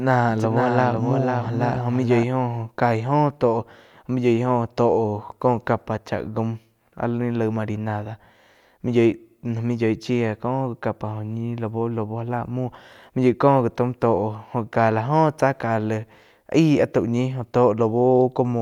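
Doubled audio track, start to 2.24 s: a dry, slightly quieter copy trails about half a second behind, likely from a duplicate capture path, then stops abruptly.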